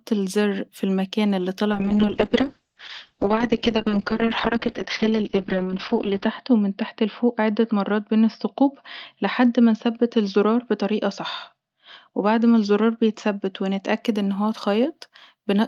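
Speech clip with a call bitrate drop from 1.72 to 14.09 s, after "الزر في المكان اللي": the encoder falls from 32 to 6 kbps and the audio band narrows from 20 kHz to 6 kHz, so everything turns muffled and rough, bottoming out for about 4.5 s before clearing at "ان هو".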